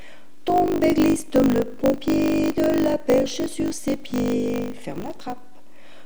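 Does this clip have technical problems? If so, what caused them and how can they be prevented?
Yes. Throughout the clip the waveform sits off centre, eating headroom and leaving steady energy at the very bottom of the spectrum, though the shift itself is inaudible. This is DC offset, a constant added somewhere in the chain. Prevent it with a high-pass or DC-blocking filter ahead of recording.

A steady 50 Hz buzz also runs the full length, and the sound plays about 1.07 times too fast while keeping roughly its normal pitch. This is a truncated block size mismatch: one stage writes longer blocks than the next reads, so each block's tail is discarded. The pattern fits 1024-sample blocks being cut short. Prevent it by configuring every stage to use the same buffer size.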